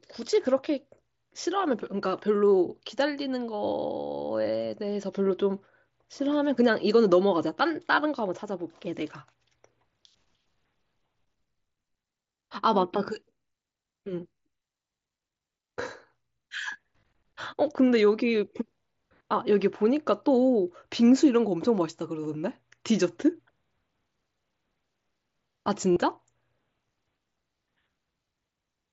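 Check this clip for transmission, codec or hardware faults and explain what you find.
Two short dropouts point to concealed Bluetooth headset packet loss, at 17.01 to 17.03 s and 25.93 to 25.97 s. Lost 22.5 ms and 37.5 ms stretches were refilled by repeating recent waveform, heard as brief buzzy holds with a slight warble on recovery.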